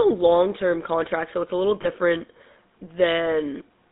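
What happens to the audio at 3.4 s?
At 3.4 s the speech still carries the GSM full-rate codec damage present across the whole clip, consistent with a 13 kbps GSM coder. The pulse-driven vocal-tract model gives a buzzy, gravelly roughness, and a spectrogram shows energy confined to roughly 200 Hz to 3.7 kHz.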